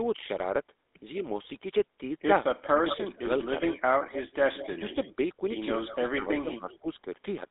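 Throughout, the GSM full-rate codec gives a buzzy, gravelly roughness; spectrograms show nothing above 3.8 kHz, with the line band running roughly 250 Hz to 3.7 kHz. From 2.56 to 3.74 s, speech suppressed in double talk dips the speech by up to about 20 dB, likely because an echo canceller ducked both sides at once; the waveform shows chopped, shrunken envelopes. Within that stretch, from 2.63 to 3.1 s, an echo leak adds a strong copy 181 ms late, only about 5 dB down, likely from loudspeaker pickup the canceller missed; spectrograms show repeated, smeared harmonics. Fainter echo follows from 3.43 to 5.12 s at about 15 dB down, overlapping further suppression from 4.52 to 5.17 s of about 10 dB. A brief echo at 5.87 to 5.96 s sits about 20 dB down. Suppression then returns from 5.96 to 6.87 s at up to about 15 dB, with an echo about 15 dB down from 6.36 to 6.77 s.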